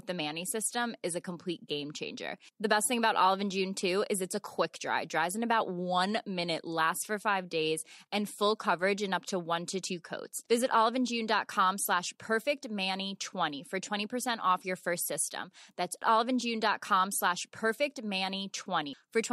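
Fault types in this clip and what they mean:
No technical faults can be heard anywhere in the clip. There is nothing here to list under any fault type.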